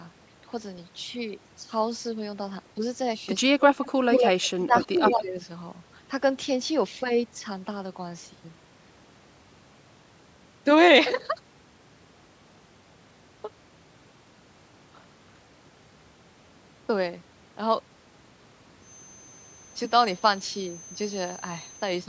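Speech on a call, with the talker's level dipping in short bursts: a slight dip from 2.76 to 2.82 s, then deeper drops of around 15 dB from 3.58 to 3.82 s and across 4.56 to 5.38 s. This is speech suppressed in double talk. The other side was likely speaking at the same moment, and the echo canceller, unable to tell the near talker from its loudspeaker echo, pulled everything down together.

Overlapping those dips, a second copy of the voice trails the original by about 150 ms, in scraps at 3.81 to 3.91 s, 4.78 to 4.85 s and 5.06 to 5.14 s, and in a longer stretch from 4.11 to 4.49 s. The scraps sit about 5 to 15 dB below the direct speech, while the longer stretch is about as loud as the speech itself. That is an echo leak. On the far end, a loudspeaker's output was likely picked up by the microphone and not fully cancelled, so the residue was sent back down the line.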